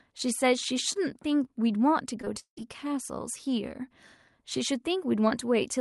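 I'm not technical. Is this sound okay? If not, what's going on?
No. From 2.21 to 2.69 s the speech turns choppy. This is repeated packet loss: on the call connection, small chunks of audio failed to arrive in time, five times in under half a second, the longest gap lasting 175 ms. Each time, the receiving end papered over the hole by stretching the last bit of sound it had, so roughly half of that stretch is filler rather than real speech.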